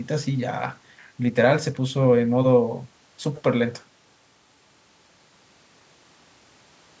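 Nothing goes wrong anywhere in this bit of speech; the call's microphone processing just trims the deepest bass and leaves nothing above 8 kHz, which is how that path normally sounds.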